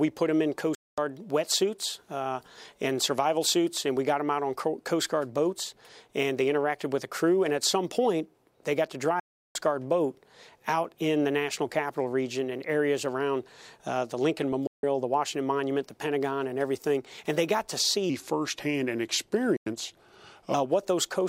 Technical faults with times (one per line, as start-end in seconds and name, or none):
0.75-0.98 digital broadcast dropout
9.20-9.55 digital broadcast dropout
14.67-14.83 digital broadcast dropout
18.10-20.54 section at the wrong speed
19.56-19.67 digital broadcast dropout